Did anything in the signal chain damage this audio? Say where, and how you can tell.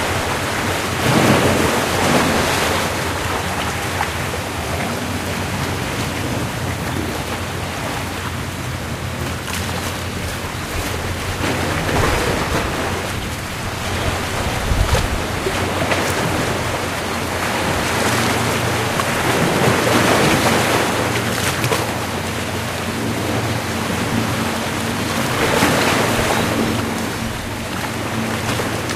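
Yes. Crude rate conversion is audible from 5.26 s to 13.26 s, at the sample-format conversion stage. Through that stretch a gritty, inharmonic fizz rides on the loud and high parts of the sounds. Samples were dropped or repeated to the nearest position rather than filtered, and the resulting periodic timing error, which fits a 48 kHz to 44.1 kHz conversion, spawns shifted, inharmonic copies of the sound roughly 25 dB below it.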